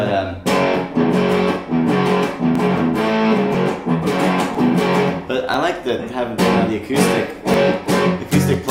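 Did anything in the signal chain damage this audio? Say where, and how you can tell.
Yes. The damage happened at the driver or buffer stage, where periodic USB or driver dropouts occur. Something on the host stalls the USB transfer or the audio driver about once every second (a period of 1.00 s), and each time roughly a millisecond of samples is skipped. The surrounding audio is then joined directly across the gap. These splices produce evenly spaced ticks from 0.56 s to 8.54 s, around ten in all. They are audible only where signal is present.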